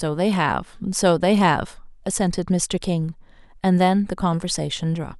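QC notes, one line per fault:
No faults found in this clip.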